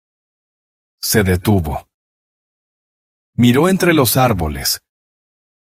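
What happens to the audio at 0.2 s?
Nothing goes wrong at 0.2 s; the audio plays through that moment intact, with no dropout, click or distortion.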